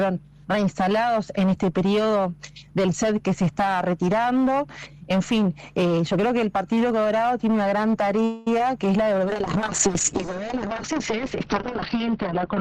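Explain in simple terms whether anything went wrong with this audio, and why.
Three things go wrong, all late in the clip.

From 8.24 to 8.48 s there is a call audio freeze: the last sound is stretched into a fading buzz or hiss for about a fifth of a second. The likely cause is delayed network packets leaving the receiver's buffer empty. When they arrive, playback resumes where it stopped, so nothing is lost, but everything afterwards runs slightly late.

At 8.59 s comes a short concealed packet loss. About a hundredth of a second of audio never arrived, and the receiver patched the hole by continuing the previous sound, heard as a tiny smear or wobble.

From 9.25 s to the end there is a call bitrate drop. The connection reported less capacity, so the encoder switched to far coarser coding and cut off the upper frequencies above about 6 kHz. The sound turns duller and rougher and stays that way.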